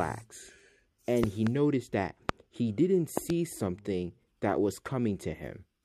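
Sharp loud pops cut through the sound, which carries on beneath them: a double pop from 1.24 to 1.49 s, roughly 20 dB above the signal; a single harder one at 2.29 to 2.31 s, about 25 dB up; another double from 3.17 to 3.32 s, about 15 dB up. Each is likely a brief voltage spike from a switch, static or a driver glitch.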